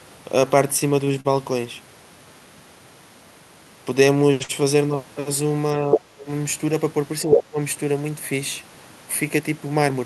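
At 1.05 to 1.13 s and again at 1.20 to 1.28 s there are two short stalls from late packets. Each time the next packet missed its playout deadline, the jitter buffer ran dry, and the receiver stretched the last sound to cover the wait. The first stall is held for about 22 ms and the second for about 45 ms, so the delay grows by those amounts. Playback then continues from the same point. Nothing is lost, but the sound is drawn out, with a faint buzzy hold or dip.

From 4.43 to 4.52 s there is a burst of packet loss. Around 60 ms of audio never arrived in time to be played. The receiver concealed the hole by extending the preceding sound for about 58 ms while fading it down, which produces a held buzz or fading hiss in place of the real signal. When the stream resumes it has jumped forward, and the roughly 60 ms in between is simply gone.

Between 5.75 and 6.29 s the talker is pulled down in level by around 25 dB at the deepest point, over about half a second in total. 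This is likely speech suppressed in double talk. With both ends active at once, the echo canceller could not separate near-end speech from loudspeaker echo and attenuated everything, so the talker dips, thins out and partly drops away. The same thing recurs from 7.26 to 7.59 s, this time with a drop of around 30 dB lasting about a third of a second.

Inside those dips, at 5.91 to 5.97 s and 7.31 to 7.41 s, a second voice is audible, likely the other side's voice leaking through. The far end was playing on the talker's loudspeaker, and the echo canceller left residual echo in the microphone signal. Because the near-end talker is being suppressed at the same moments, these brief fragments come through roughly 5 dB louder than the talker.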